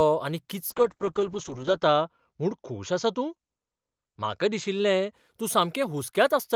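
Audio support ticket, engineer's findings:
Call bitrate drop, 0.7–5.19 s. Speech turns rough and muffled, worst for about 1.15 s. Spectrogram: content above 8 kHz disappears (from 20 kHz), smeared coarse texture. Opus encoder after a bandwidth-estimate fall; fits roughly 40 kbps dropping to 8 kbps.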